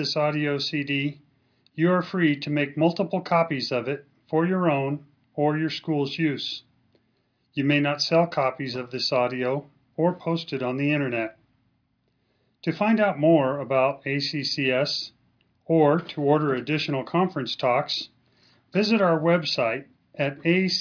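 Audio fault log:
No fault is logged for this clip.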